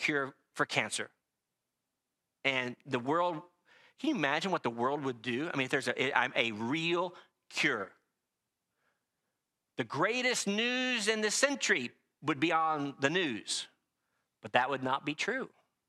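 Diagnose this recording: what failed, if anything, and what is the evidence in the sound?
Nothing failed; no faults heard.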